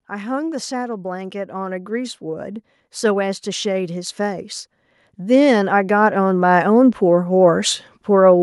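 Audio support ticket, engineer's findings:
Automatic gain rising at 0.09–4.5 s and 5.16–8.38 s: AGC raised gain about 10 dB, then about 7 dB, on quiet input; speech and background swell together.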